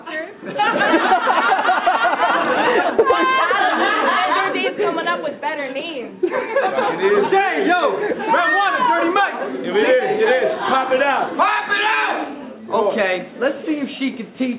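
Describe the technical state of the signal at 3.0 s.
Right around there you've got a sudden gain jump, from 2.90 to 2.99 s. The level drops by about 6 dB in one step, background included, most likely a gain setting applied without a ramp. All of it sits inside the call path's 4 kHz band.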